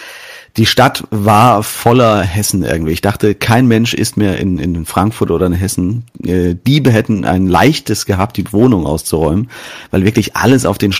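Hard clipping flattens the speech peaks at 0.60–0.88, 1.27–2.14, 3.06–3.77 (before "ist mehr in in"), 4.98–5.23 (before "oder in"), 8.10–8.73, 9.14–9.28 and 9.98–10.86 s. The signal overshoots a stage's ceiling by about 2–4 dB, so the peaks crackle harshly. The waveform shows flat-topped peaks, and the spectrogram shows bright high-frequency smearing.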